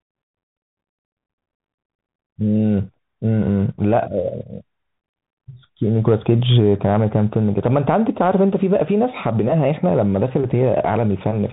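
Throughout, the speech carries Bluetooth CVSD headset codec damage: nothing above 3.8 kHz survives, sibilants turn scratchy, and a granular hiss sits underneath, consistent with one-bit 64 kbps delta coding.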